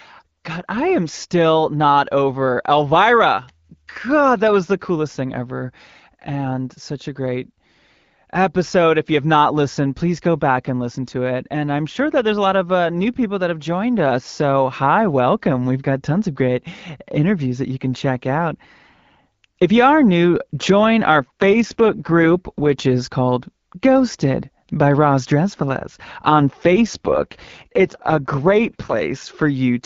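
Speech on an AMR wideband link shows two AMR rate drops. From 21.18 to 22.70 s and from 26.29 to 28.94 s, the voice turns rough and synthetic. There is no gap and no band loss. This fits a weak radio link forcing 12.65 down to 6.6 kbit/s.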